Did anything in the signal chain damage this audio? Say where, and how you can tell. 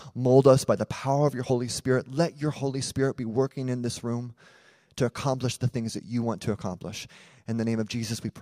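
Yes, and it's at the codec stage. Right after "the power of your", at about 1.49 s, the speech jumps forward by roughly 50 ms. That's compressed frames skipped: about two whole frames never got decoded, either missing or rejected as damaged. The jump length fits a frame of around 23 ms.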